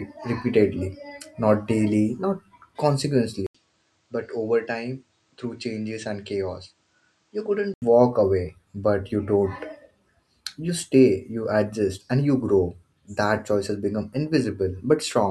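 At 3.47 s the speech breaks for a gap of about 80 ms. Then the sound turns dull and boxy. Nothing comes through above 9 kHz, and the level drops by a few decibels. A faint new background hiss sits well below the speech. At 7.82 s the fuller sound returns. This is an input switched to a poorer device, likely a change to another microphone or a headset's call mode, with its narrower band, different tone and own noise.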